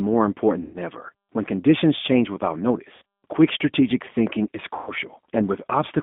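G.729 codec damage runs through all of the speech: a low-rate codec, consistent with 8 kbit/s G.729A, rebuilds each 10 ms frame from a filter, a pitch predictor and a few pulses. This leaves a rough, slightly synthetic quality, with the band held between 200 Hz and 3.5 kHz.

VoIP packet loss concealed by the speech codec occurs at 0.62 to 0.78 s, 2.96 to 3.02 s and 4.75 to 4.92 s. About 120 ms, 60 ms and 120 ms of audio go missing, and the decoder extrapolates from its last frame, so each gap is stretched into a buzzy tone or coloured noise that fades.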